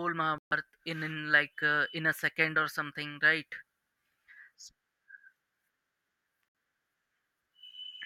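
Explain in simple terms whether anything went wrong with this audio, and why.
The speech cuts to silence twice, from 0.38 to 0.53 s and from 6.48 to 6.55 s, then carries on as if it had kept playing. That is a Bluetooth dropout, likely caused by packets arriving at the headphones too late and being discarded.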